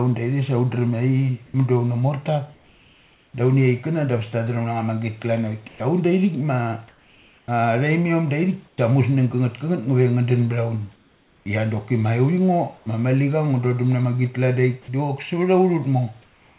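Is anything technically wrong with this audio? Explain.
Yes. A voice-activity detector on the sending side appears to be gating the audio, causing three kinds of fault.

Sound dropped by the voice detector, at 1.46 to 1.54 s, 12.78 to 12.86 s and 14.82 to 14.88 s. Each time, the detector likely misjudged a soft stretch of speech as background and stopped transmitting, so the receiver filled 80 ms, 80 ms and 60 ms with synthetic noise. About 40 ms, 30 ms and 40 ms of real speech are lost, heard as a clipped edge where the sound briefly turns to flat hiss.

Comfort noise in place of the background, at 1.46 to 3.34 s, 10.96 to 11.46 s and 16.22 to 16.58 s. In these pauses the sender likely switched to discontinuous transmission, and the receiver generated noise shaped roughly like the room. The real room noise, sitting about 39 dB under the speech in this narrowband call audio, gives way to a smooth, featureless hiss. 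In the later two spans that hiss is about 3 dB quieter than the real background.

Sound chopped by the voice detector, from 5.68 to 8.78 s. Here the detector likely toggled between sending and muting more than once, replacing about 820 ms in total with synthetic fill. Quiet syllables and word edges drop out intermittently, so the speech sounds choppy.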